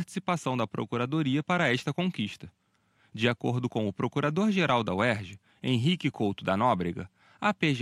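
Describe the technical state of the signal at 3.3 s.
At 3.3 s the speech signal is intact, with no technical fault present at that moment.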